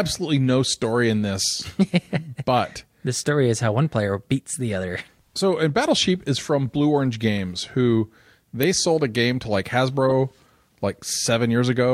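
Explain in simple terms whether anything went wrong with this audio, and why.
Three short glitches come from a corrupt frame decoded. A damaged chunk of compressed data got played anyway, leaving brief squeaky blips: at 7.38 s, at 8.63 s right before "sold a game to", and from 10.08 to 10.11 s just after "a game to like".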